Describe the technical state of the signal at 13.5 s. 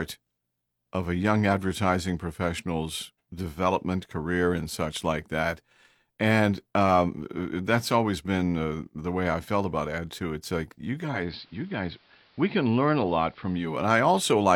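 At 13.5 s you're still on the analogue side of a digital radio blending to analogue episode that runs from about 10.87 s to 13.94 s. The receiver lost its digital stream and cross-faded over roughly 408 ms to the station's AM broadcast. So right here the sound is band-limited, sits about 3 dB quieter, and carries a hiss bed somewhere around 35 dB down.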